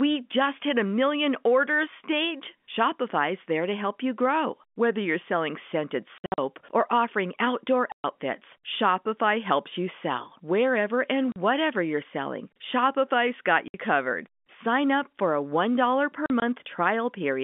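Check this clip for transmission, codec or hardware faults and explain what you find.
There's one fault here: packet loss filled with silence, sitting on top of G.711 telephone coding that keeps everything within the 200 Hz to 3.5 kHz line band.

Speech drops out at 6.18 to 6.38 s, between "you're selling scented" and "or offering outdoor", then at 7.92 to 8.04 s, right after "or offering outdoor", and again at 11.32, 13.68 and 16.26 to 16.42 s. The receiver played silence in place of missing packets, so the holes have hard edges. Their lengths step in multiples of 20 ms, which fits 20 ms packets.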